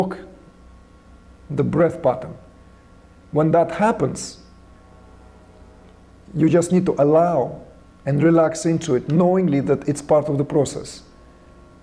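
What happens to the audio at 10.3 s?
Nothing goes wrong at 10.3 s; the audio plays through that moment intact, with no dropout, click or other fault.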